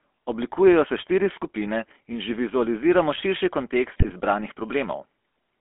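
GSM full-rate codec coding, throughout: the voice is rebuilt from a vocal-tract model and sparse pulse excitation within roughly 250 Hz to 3.4 kHz, giving a plainly buzzy, gravelly roughness that fits 13 kbps coding.

GSM bit errors, 3.96 to 4.12 s, just after "že vizualiziramo širši": corrupted filter, pitch and gain values reach the decoder, so the voice briefly breaks into squawks, pops and gargling.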